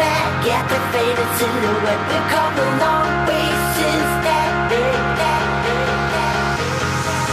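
Nothing in this recording stood out as a technical problem on listening.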